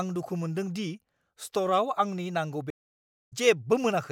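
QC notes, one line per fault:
2.70–3.33 s, stream reconnect: the connection dropped, so the player lost its input, re-established the link and began a fresh decoder partway through the stream. The result is a gap of about 0.61 s of silence, after which the speech picks up roughly 0.7 s further on than where it broke off, so a stretch of content is simply missing. The first frame or two on return are muted or fade in as the new decoder starts.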